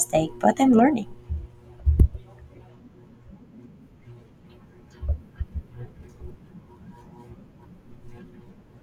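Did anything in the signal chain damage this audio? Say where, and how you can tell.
Yes: at 1.99 s the speech has a brief glitch lasting about 12 ms, pointing to damaged data in a compressed stream. The decoder lost frame sync and resynchronised at the next header.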